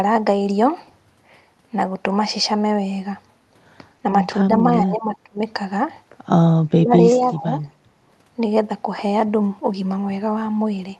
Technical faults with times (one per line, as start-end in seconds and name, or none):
4.84-5.39 speech suppressed in double talk
6.71-7.61 speech suppressed in double talk
7.16-7.25 echo leak
7.80-7.95 background gated by the echo canceller